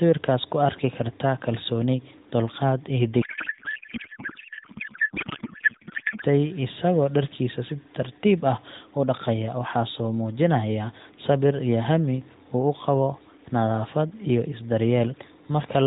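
From 3.22 s to 6.24 s, after "kartaa kalsooni dulqaad iyo", the speech gives way to garbled noise and warble that barely tracks it, until speech returns at "isagoo dharkiisa si tartiib". This is a codec payload misread: octet-aligned AMR frames are being unpacked as if bandwidth-efficient, so every field lands in the wrong place. Around it, the band-limited AMR narrowband mobile codec path sounds lightly coded, which fits the 12.2 kbps mode.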